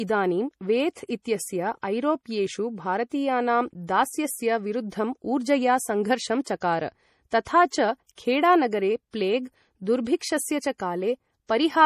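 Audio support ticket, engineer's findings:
Throughout: watery, swirly texture on speech, plainly audible, hard treble cutoff with nothing above 14.9 kHz. Likely MP3 compression at a low bitrate, consistent with about 40 kbps. Encoder starved of bits, dropping high band and weak spectral lines that flicker frame to frame.

Pre-echo at 6.44 to 6.46 s, 6.60 s and 7.44 to 7.47 s: brief hiss of roughly 17 to 23 ms ahead of sharp onsets, attacks softened. Transform codec spreading block quantisation noise into the quiet lead-in before each transient.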